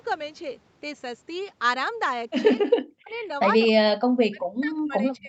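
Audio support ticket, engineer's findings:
Speech dips by about 40 dB, near cutout, 2.6–3.13 s and again 3.65 s to end; likely speech suppressed in double talk, echo canceller muting near-end talker during far-end speech.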